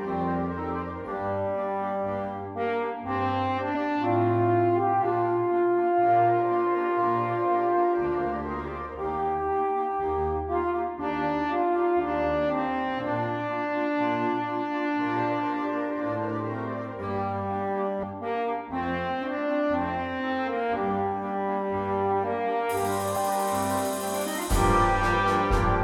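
Damaged data in a compressed stream at 3.74 s, 18.02–18.04 s and 23.15 s: corrupted frames throw the decoder out of sync while it hunts the next header, leaving brief glitches.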